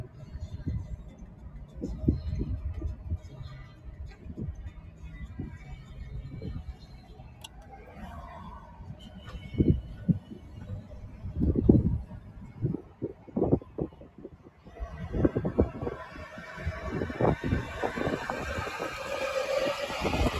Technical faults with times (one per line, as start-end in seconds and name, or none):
0.00-20.40 noise suppressor applied to music or sounds
0.06-0.35 sound cut by the noise suppressor
1.03-1.77 sound cut by the noise suppressor
3.18-5.93 sound cut by the noise suppressor
6.68-7.98 sound cut by the noise suppressor
8.61-11.24 sound cut by the noise suppressor
12.12-14.67 sound cut by the noise suppressor